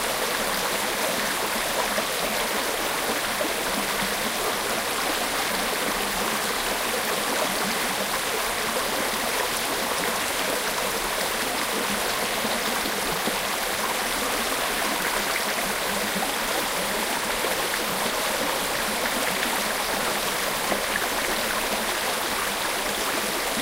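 Listening to these everyday sounds, nothing stood out as a technical fault at any point.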